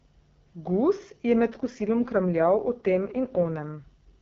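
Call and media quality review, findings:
AMR rate drop from 1.50 s to end: speech turns rough and raspy as AMR-WB falls from 12.65 to 6.6 kbit/s, likely a weak radio link trading speech bits for error protection.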